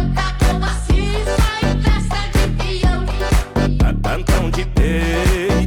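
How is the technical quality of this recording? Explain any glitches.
No glitches or faults are audible.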